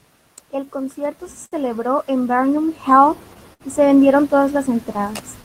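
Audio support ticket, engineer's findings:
Clock drift between sender and receiver, whole clip. Sender's clock running slow, roughly 5% behind ours. Jitter buffer keeps draining, so the receiver has to pad. Heard as a slightly sluggish, uneven pace with small hiccups recurring throughout. Probable component: sender audio clock vs. our playout clock.

Repeated timing corrections, 0.03 to 3.00 s. Receiver stretching to keep up with the slow sender: playback at about 98% speed, around 70 ms added overall. Small repeated slivers, all in the same direction, unevenly spaced. Jitter buffer's adaptive playout doing the padding.

Short stall from a late packet, 1.46 to 1.55 s and 3.53 to 3.63 s. Packet missed its slot, buffer ran dry, last bit of sound held. Fill of 61 ms, then 65 ms, nothing dropped. Picks up where it left off, so it sounds like a stretched sound with a slight buzzy dip. Playout delay grows by the same amount each time. 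Likely cause is the drift starving the buffer.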